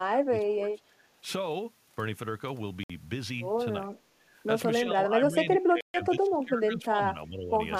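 Speech recording with two kinds of trouble. The bigger one is speech suppressed in double talk: from 0.0 to 1.1 s the level sags by around 20 dB over roughly a second, again briefly from 3.97 to 4.23 s by about 10 dB, and then through most of 4.8 to 7.58 s by around 20 dB for about two seconds in patches. That pumping pattern is likely an echo canceller treating the talker as loudspeaker echo while the far end was also talking, and clamping both down. On top of that there are two Bluetooth stalls, where the audio drops to dead silence and then carries on: 61 ms at 2.83 s and 134 ms at 5.81 s. These are likely the headphone buffer running empty while interference held up packets, with playback pausing until the retransmissions arrived.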